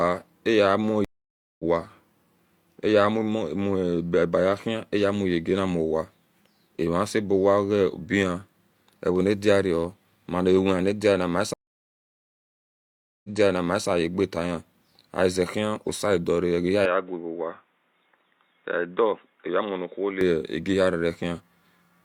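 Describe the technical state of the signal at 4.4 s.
At 4.4 s the signal is intact, with no fault audible at that moment.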